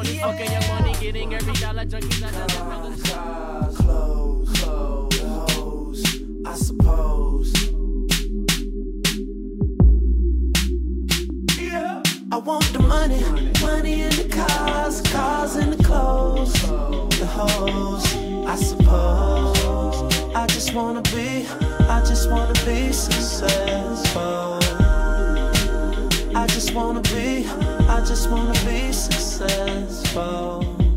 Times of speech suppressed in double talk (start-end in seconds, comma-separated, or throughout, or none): none